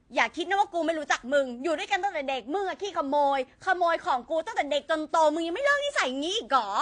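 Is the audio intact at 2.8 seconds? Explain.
No. At 2.8 seconds the audio sits inside a stretch of de-emphasis applied wrongly, running from about 2.04 to 4.46 s. A treble-cut filter meant to reverse pre-emphasis was applied where none existed, or applied twice, so the response tilts downward smoothly with rising frequency, reaching about 8 dB down at 10 kHz relative to 1 kHz. The speech there loses its crispness and sounds dull and muffled.

The same moment also carries the clip-wide damage from transcoding between lossy codecs. The likely cause is the speech being encoded once, then re-encoded into a lower-rate codec, with artefacts that fit a 96 kbit/s WMA pass followed by AAC-LC at 32 kbit/s. The second encoder wastes bits reproducing the first one's errors and adds its own, so two kinds of coding smear are heard together, with nothing above 9.8 kHz.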